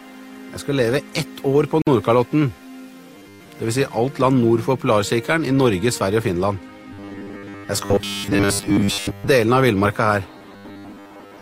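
At 1.82 s there is a gap at a join of encoded pieces: a 51 ms gap with smeared edges, left where separately encoded segments were joined untrimmed. From 3.16 to 3.48 s, 6.93 to 9.28 s and 10.38 to 11.41 s, the sound becomes a rigid 100 Hz metallic buzz. This robotic sound likely comes from a 10 ms buffer repeated while most of the real audio is skipped.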